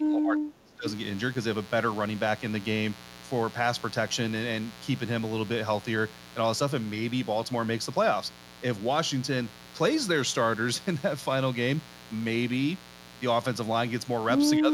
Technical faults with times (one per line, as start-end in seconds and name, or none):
0.00-14.74 mains buzz
0.00-0.86 speech suppressed in double talk
14.58-14.74 speech suppressed in double talk